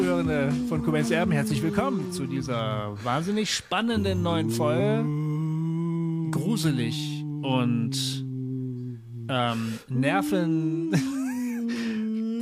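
At 4.76 to 4.78 s the audio lurches forward, and roughly 150 ms of sound simply never arrives. This is compressed frames skipped: a few whole frames of the encoded stream, each 42.7 ms long, were either missing or rejected by the decoder as damaged.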